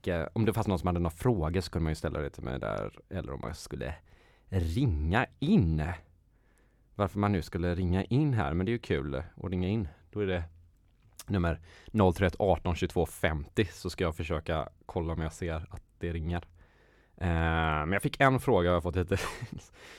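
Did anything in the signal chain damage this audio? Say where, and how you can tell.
No, nothing in the chain did.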